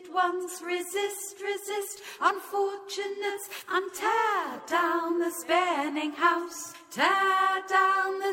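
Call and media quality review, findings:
Adaptive stream at a lower bitrate, 2.19 s to end: abrupt, gapless drop in quality; treble turns synthetic and hazy, codec artefacts rise. Stream player switched to a lower-bitrate rendition, consistent with moving from about 96 to 48 kbit/s with band replication. Spectrogram: sharp step at 2.19 s, upper band smeared and patchy; waveform continuous.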